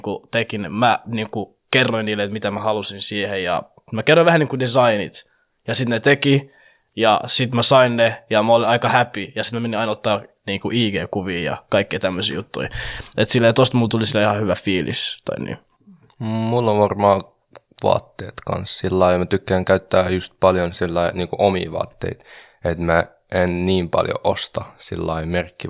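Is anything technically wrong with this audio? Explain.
No, nothing technically wrong stood out on listening to this speech recording.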